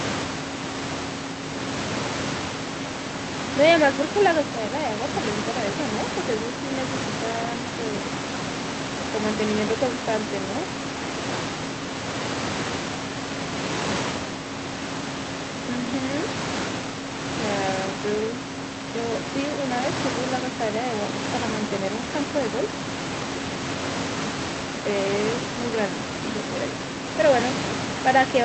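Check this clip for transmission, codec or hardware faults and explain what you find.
No transmission, codec or hardware faults are audible; the room noise sits about 7 dB under the speech, and the top end stops near 8 kHz, which fits a wideband Opus call path working as intended.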